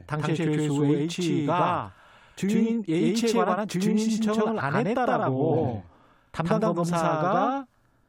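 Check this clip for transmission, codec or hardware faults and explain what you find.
One fault runs through the whole speech clip: a doubled audio track. A second full-band copy trails about 100 ms behind at roughly equal level, likely from a duplicate capture path, giving a flat slapback with no decay or room colour, unlike reverb or acoustic echo.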